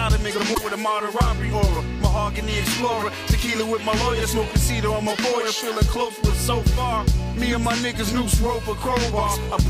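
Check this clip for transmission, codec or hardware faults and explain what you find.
There is one fault, damaged data in a compressed stream, from 0.51 to 0.58 s. Corrupted bytes there make the decoder misread frames, lose sync and hunt for the next valid frame header. The result is a brief glitch of about 70 ms.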